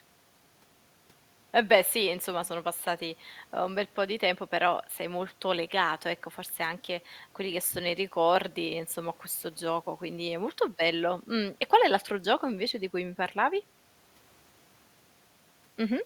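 No technical faults are audible anywhere in the speech recording.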